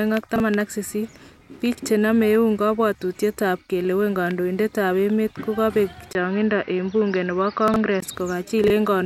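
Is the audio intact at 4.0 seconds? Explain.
Yes, at 4.0 seconds the speech plays through intact, with no dropout, click, distortion or other fault at that moment.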